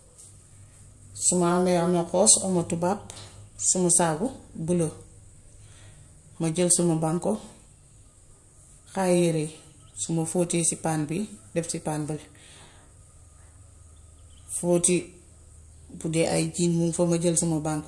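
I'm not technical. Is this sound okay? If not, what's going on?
Yes, nothing stood out as a problem when listening to this recording.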